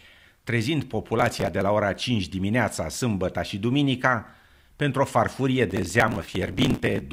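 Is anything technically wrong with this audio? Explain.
Yes. Processor overload crackle occurs twice in this speech clip: from 1.19 to 1.61 s, ending just before "la ora", and from 5.70 to 7.01 s, starting after "duminica pentru o farfurie". The processor misses the deadline on many very short buffers, around a millisecond and a half each, in quick succession. Each missed buffer is skipped, leaving a hard-edged gap. The gaps pile up into a gritty, tearing crackle over the speech, much longer in the second burst.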